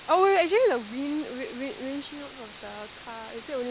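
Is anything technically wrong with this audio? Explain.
Yes. Throughout the speech, the signal has been reduced to a low bit depth with dither, which fits about 5 bits, with dither noise added before each sample was rounded. So few levels exist that the rounding error is large, and the dither spreads it into steady white noise rather than distortion. The result is a constant, even hiss sitting only about 10 dB below the speech, heard through the call path's band that stops at 4 kHz.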